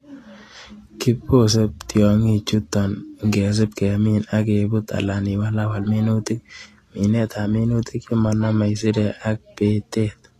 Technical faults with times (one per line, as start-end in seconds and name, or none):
0.00-10.39 low-bitrate audio saved at a high bitrate